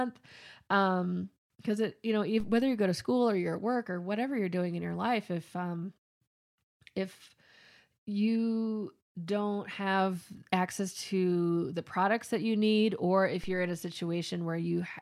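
At 2.40 s and again at 13.44 s, a DC step occurs. The waveform's zero line jumps by about -34 dBFS. Each jump is heard as a low thump under the speech. The offset then decays away, as a 2 Hz high-pass would drain it.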